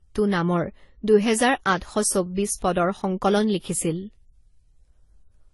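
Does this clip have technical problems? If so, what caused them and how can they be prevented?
Yes. Throughout, nothing above 11.5 kHz, with two codecs' artefacts heard together, likely from transcoding between lossy codecs. A single codec wouldn't stack mismatched artefacts. Prevent it by encoding once from the original source.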